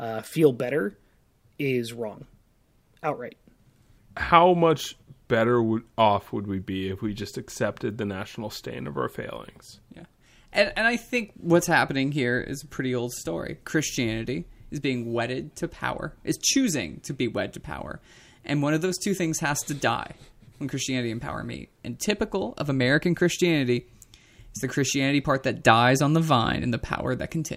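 A spoken recording with nothing technically wrong to point out anywhere along the way.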